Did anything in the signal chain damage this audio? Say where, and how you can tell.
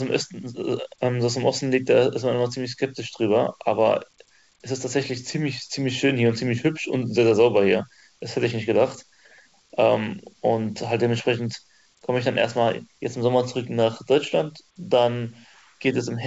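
No, nothing in the chain damaged it: the speech came through a WebRTC call path working as intended, and the lack of content above 8 kHz is simply that path's normal wideband limit, which fits G.722 at 64 kbps.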